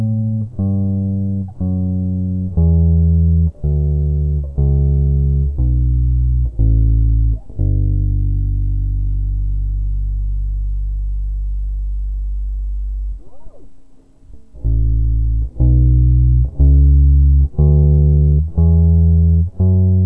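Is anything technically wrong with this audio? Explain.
Yes. There is a wrong sample rate throughout the music. The samples are clocked out at roughly half the rate they were captured at, with no conversion, which fits 44.1 kHz material played at about 22 kHz. Everything runs at 0.5 times speed and sits 12 semitones, a full octave, lower, so it sounds dragged, sluggish and deep.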